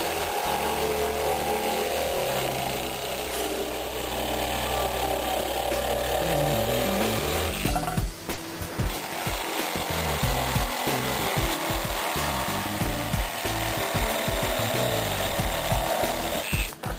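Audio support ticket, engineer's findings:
Short concealed packet loss at 8.33–8.39 s: brief smear, 40 ms filled. Receiver jitter buffer/decoder extrapolated the preceding sound, then cross-faded back. No hard silence or sharp click, unlike an unconcealed dropout; the gap is papered over with continued sound.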